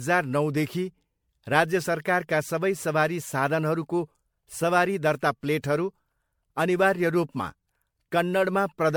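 A speech recording with generation loss throughout: swirly, hollow and smeared, with blurred attacks, likely from about seven MP3 re-encodes at what sounds like 96 kbit/s.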